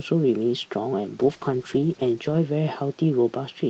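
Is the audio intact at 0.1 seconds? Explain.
Yes, the audio is intact at 0.1 seconds, with no fault at that moment.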